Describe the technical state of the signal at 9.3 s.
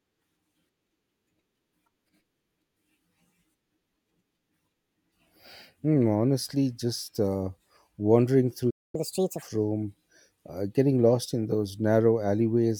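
Catch-up at higher speed, from 8.95 to 9.43 s after "just uh wandering through": the player resamples its backlog at 1.5 times speed, so pitch rises about seven semitones with it, unlike a pitch-preserving time-stretch.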